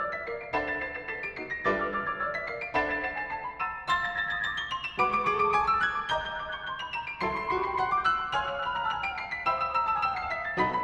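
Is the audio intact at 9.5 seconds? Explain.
Yes, the audio is intact at 9.5 seconds, with no dropout, click, distortion or other technical fault at that moment.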